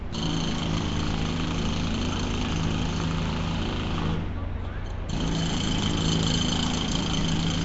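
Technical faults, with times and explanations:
Throughout, Nellymoser compression: the sound carries a rough, hissy halo and a smeared, watery blur, with nothing at all above about 7.7 kHz. This likely comes from the old Flash microphone codec, Nellymoser Asao, at a rate that fits about 32 kbps. Coarse block coding starves weak bands and refills them with noise. A spectrogram would show a hard ceiling near 7.7 kHz and speckled, grainy noise patches between the stronger bands.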